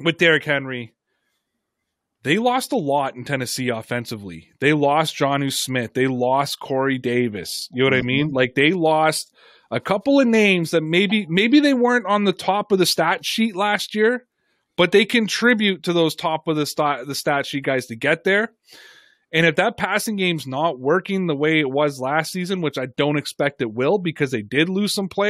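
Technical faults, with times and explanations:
No technical faults are present anywhere in the speech recording.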